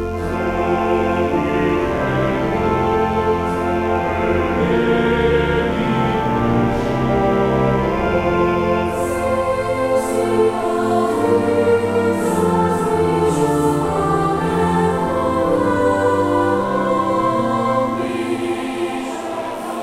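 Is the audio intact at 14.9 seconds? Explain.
No. A mains buzz runs through the whole clip, including 14.9 seconds. Sharp switching spikes twice per 50 Hz cycle add harmonics reaching several kilohertz. The result is a steady, raspy buzz, roughly 35 dB below the main sound.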